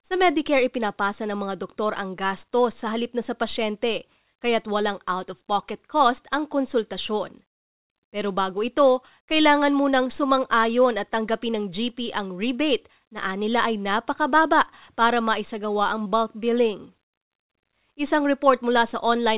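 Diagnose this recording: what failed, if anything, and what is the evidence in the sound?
Short concealed packet loss at 16.04 to 16.07 s, a network-stage fault in the call path, falls between "napakababa para maisagawa ang" and "bulk billing". About 20 ms of audio arrived too late, and the receiver extended the preceding sound, leaving a brief smear before blending back. The band stops at 4 kHz, which fits a narrowband G.711 call codec.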